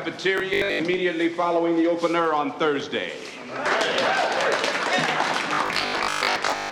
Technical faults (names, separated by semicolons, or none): robotic sound from repeated short buffers